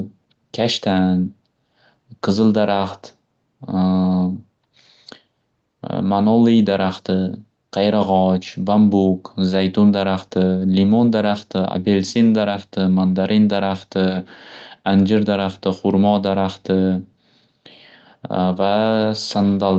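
The speech shows no technical faults; it carries the ordinary character of a call path, with nothing above 8 kHz after the call's microphone processing and coding that fits an Opus stream at around 32 kbps.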